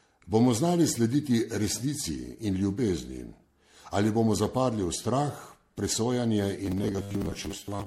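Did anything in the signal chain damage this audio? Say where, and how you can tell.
Yes. Throughout the clip there is generation loss at the codec stage: swirly, hollow smearing and blurred attacks, with nothing above 16.5 kHz. That is worse than a single 64 kbit/s MP3 pass would explain, which fits the audio likely being re-encoded around seven times.

From 6.66 s to 7.86 s the speech turns into a rigid metallic buzz at 100 Hz. This is robotic sound from repeated short buffers at the driver or buffer stage. A 100 Hz buzz fits a 10 ms block being replayed, likely with about half the real audio skipped. Codec smearing has no fixed pitch, so the steady buzz sets this fault apart.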